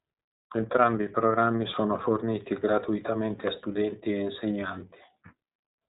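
Throughout the speech the sound is clearly narrowband, with nothing above about 3.8 kHz, and carries a plainly audible rough, slightly synthetic grain. This is iLBC codec damage: each 30 ms frame is coded on its own, consistent with the 13.33 kbps mode.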